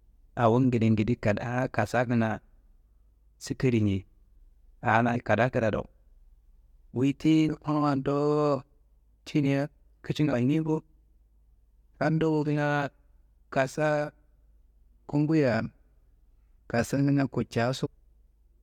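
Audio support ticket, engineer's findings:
Compressed frames skipped at 5.14 s, 7.47 s and 17.85–17.87 s. Speech jumps ahead roughly 150 ms, 70 ms and 200 ms, which points to several whole frames lost in decoding.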